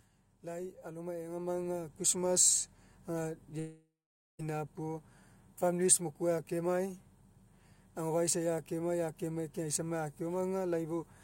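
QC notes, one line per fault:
0.42–5.12 s, automatic gain rising: voice and background noise swell together by about 10 dB over several seconds as the gain control lifts a quiet input. Because the noise floor rises with the voice and the climb is slow, this is not a sudden level step or compressor pumping.
3.59–4.41 s, long network dropout: the sound smears into a fading buzz, then about 0.49 s of near-silence, and speech resumes with roughly 0.8 s missing. This is likely a network outage concealed by the receiver, and the skipped content sets it apart from a mute or noise gate.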